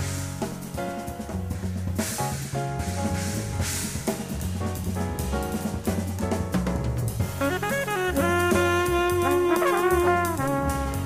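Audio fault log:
Nothing stood out on listening.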